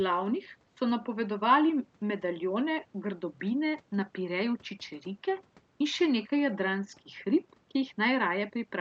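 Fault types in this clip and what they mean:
Listening through the clip, nothing stood out as a fault.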